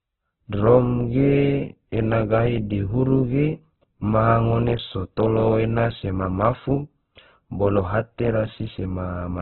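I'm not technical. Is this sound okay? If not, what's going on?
No. The speech was likely squeezed hard by Opus compression, keeping only a narrow slice of sound with nothing above about 4.1 kHz. From start to finish, the speech sounds muffled and boxed-in, with a rough, grainy edge.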